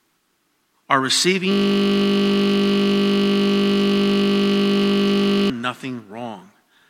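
At 1.52 s the speech gives way to a system hang loop running until 5.50 s: the machine stalled while the audio hardware kept replaying one 20 ms slice of its buffer, roughly two hundred times, so you hear a steady 50 Hz buzz instead of speech.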